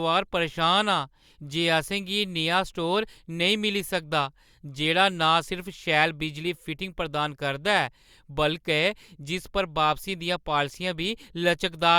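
Nothing goes wrong anywhere in this speech recording, so there's no technical fault to point to.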